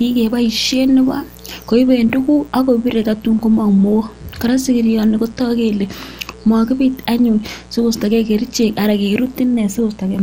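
A speech recording with a steady, raspy mains buzz throughout, roughly 25 dB below the speech. On a spectrogram it shows as evenly spaced horizontal lines at multiples of 60 Hz climbing into the kilohertz range. The speech also sounds dull and gurgling, with granular distortion, likely from MP2 compression at a low rate around 80 kbps. A spectrogram would show nothing above 17 kHz and upper bands flickering on and off.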